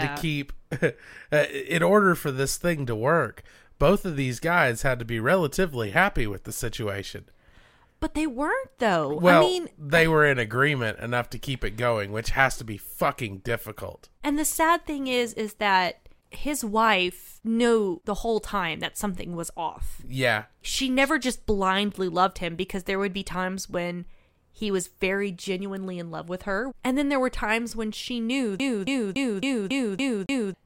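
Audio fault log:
28.59–30.54 s, CD stuck on one turn: after "times when she knew", a 279 ms slice of speech repeats seven times with brief mutes, as the laser jumps back one track each revolution.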